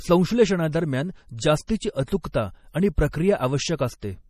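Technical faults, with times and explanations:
Throughout: MP3 compression. The speech sounds watery and swirly, with chirpy, metallic s sounds and nothing above 15 kHz. That's likely a low-bitrate MP3 around 40 kbps starving the encoder, so it chops the treble and lets weak frequency lines flicker on and off between frames.
1.67 to 1.69 s and 2.21 to 2.25 s: pre-echo. Both attacks are led by a short hiss lasting about 20 ms and 31 ms, and they land soft. The codec spread noise sized for the loud onset across its whole block, filling the quiet moment just before.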